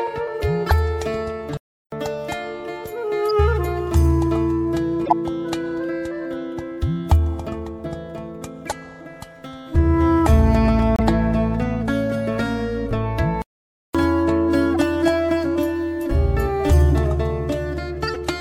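Short chirps and noise bursts mark seven corrupt frames decoded, at 0.67, 3.30, 5.05, 8.67, 10.96, 14.75 and 18.07 s. Each spans a few damaged frames the decoder still played, so energy lands at wrong frequencies. The loudest, at 5.05 s, peaks around -5 dBFS. The audio also cuts to silence twice, at 1.57 s for 0.35 s and at 13.42 s for 0.53 s, then carries on. These are playback stalls. The player likely ran out of data or its thread was blocked.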